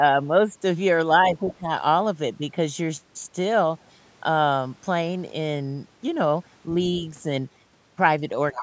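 A speech recording from a call, band-limited to nothing above 8 kHz by the ordinary microphone processing, with two moments where the echo canceller mishandles simultaneous talk. From 1.34 to 1.7 s the talker's level dips by roughly 15 dB in patches adding up to about a third of a second, which is speech suppressed in double talk, likely because the canceller could not tell the talker apart from the loudspeaker echo and attenuated everything. Inside that stretch, at 1.48 to 1.54 s, a faint trace of the other side's voice leaking through sits around 20 dB below the talker, likely residual loudspeaker echo the canceller failed to subtract. The same pair returns at the very end, 8.53 to 8.62 s: the talker drops by roughly 20 dB for about a tenth of a second, likely the same double-talk suppression, while leaked far-end voice rises to about 10 dB below the talker, which is likely uncancelled echo again and noticeably more exposed than in the earlier instance.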